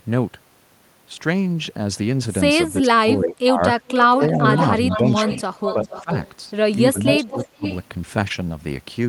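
Speech suppressed in double talk hits this speech recording at 2.8–3.61, 4.2–4.44, 4.96–6.11 and 6.93–7.64 s, with dips of up to about 30 dB, likely because an echo canceller mistook overlapping far-end talk for echo. Echo leak appears at 3.88–4.04, 4.52–6.32 and 7.05–7.77 s as a 430 ms delayed copy, about 10 dB down and closer to 5 dB at the end, likely loudspeaker pickup the canceller failed to remove.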